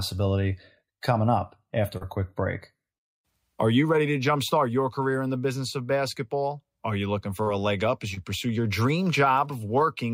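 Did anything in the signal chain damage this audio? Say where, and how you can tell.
Yes, on the network leg. There's short concealed packet loss at 1.97 to 2.03 s, 7.43 to 7.48 s and 8.14 to 8.18 s, with 40, 40 and 20 ms missing. The receiver bridged each gap by extending the preceding sound, then blended back, so you hear a brief smear.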